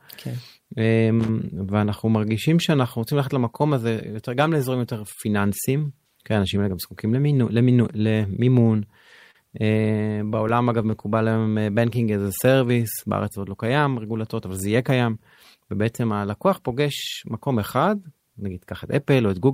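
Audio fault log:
1.20–1.29 s, loose connector crackle: A worn or dirty contact in the signal path was briefly shifting, making and breaking the circuit in quick succession. Each break chopped the speech, and each reconnection could snap any standing DC offset back onto the line, so for roughly 90 ms the sound is overlaid with an irregular, scratchy burst of crackle rather than a single clean click.
9.31–9.36 s, short stall from a late packet: One packet failed to reach the receiver in time, leaving the jitter buffer empty. Instead of going silent, the receiver extended the last stretch of speech for 38 ms until the packet turned up, then resumed from the same point. Nothing is lost, but that sound is held unnaturally long with a faint buzzy or dipped quality, and playback now runs 38 ms further behind.
9.82–11.36 s, repeated stalls (stutter): Packets kept arriving late or slower than they were being played, so the jitter buffer ran dry 13 separate times over this span. 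Each time the receiver stretched the most recent sound to cover the wait, the longest gap being 18 ms and 136 ms filled in total, about 9% of the span. No speech is missing, but the delivery drags and catches in a halting, stuttering rhythm.
11.38–12.74 s, jitter buffer slow-down: With its reserve running low, the jitter buffer set about rebuilding it by repeating single pitch periods and fragments of pauses many times in a row, adding 131 ms of audio. Speech therefore plays at about 91% of its normal rate while keeping its original pitch, so syllables and gaps sound drawn out.
14.75–16.46 s, jitter buffer speed-up: The jitter buffer had built up more audio than its target, so to bring the delay back down the receiver cut out short pieces of one or a few pitch periods over and over, removing roughly 150 ms. The speech runs at about 107% of its normal rate with unchanged pitch, which makes this stretch sound noticeably hurried.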